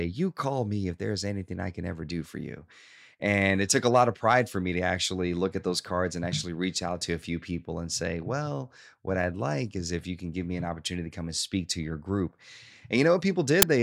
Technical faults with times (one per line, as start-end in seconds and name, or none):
13.62 file tags played as audio